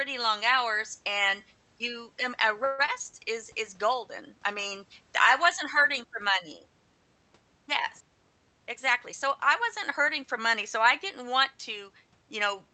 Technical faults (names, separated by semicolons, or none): call audio freeze; jitter buffer speed-up